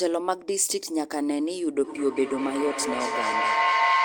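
A microphone-to-loudspeaker loop that gains level on every trip turns this speech clip into a feedback howl from 1.84 s to the end, a tone around 1 kHz pulsing roughly every 200 ms and peaking about 4 dB above the speech.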